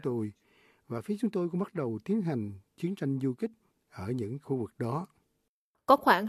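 No technical faults can be heard anywhere in the audio.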